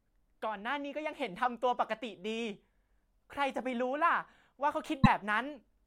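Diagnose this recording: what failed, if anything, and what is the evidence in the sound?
Codec stage. At 5.03 to 5.07 s the speech is disrupted for 44 ms, under two 26 ms frames, then continues further ahead. Likely cause: a broken MP3 bit reservoir, where frames following a cut fetch borrowed data from the wrong bytes and decode as garbage.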